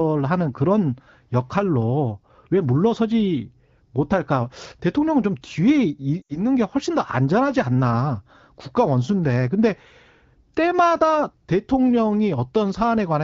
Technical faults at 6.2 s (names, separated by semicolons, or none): lost AMR speech frames